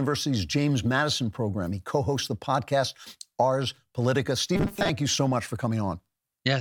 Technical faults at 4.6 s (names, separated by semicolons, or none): robotic sound from repeated short buffers